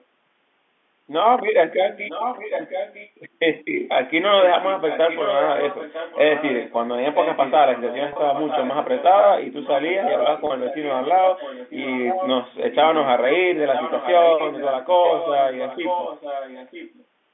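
From 2.07 to 3.20 s, and again at 4.41 to 6.74, 7.13 to 9.25, 9.61 to 12.30 and 13.73 to 17.05 s, a second copy of the speech trails the original by about 0.96 s (955 ms), sitting roughly 10 dB below it. This is an echo leak. The likely cause is a loudspeaker at the far end whose echo canceller let part of its microphone pickup through and sent it back down the line.

Within those echo stretches, at 8.13 to 8.16 s and 10.47 to 10.50 s, the speech briefly holds on a buzzy, frozen pitch before moving on. This is packet loss with pitch repetition. About 30 ms of audio went missing each time, which fits a single lost packet. The receiver filled each gap by repeating the last pitch cycle. Both losses are short, so the result sounds like a momentarily held note rather than a dropout.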